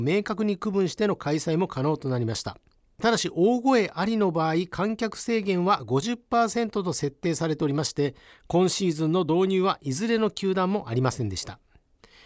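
Nothing in the speech stood out as a technical fault on listening.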